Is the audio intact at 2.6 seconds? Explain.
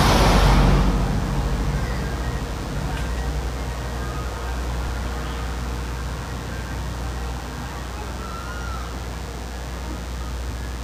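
No, DECT cordless phone buzz runs throughout, including 2.6 s: a nearby handset's 100 Hz radio bursts are rectified, giving a thin, harmonic-rich buzz roughly 20 dB below the signal.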